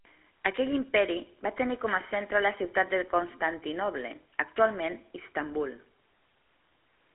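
From start to finish the speech carries the gravelly buzz of the GSM full-rate codec, which fits a 13 kbps coder. It rebuilds the voice from a vocal-tract model driven by a sparse, regularly spaced pulse train, so the excitation sounds coarse and rasping, and the damage is plainly audible. The sound sits in a 300 Hz to 3.5 kHz line band with nothing above 3.8 kHz. That grainy roughness is what separates it from a clean band-limited telephone line, which would sound muffled but smooth.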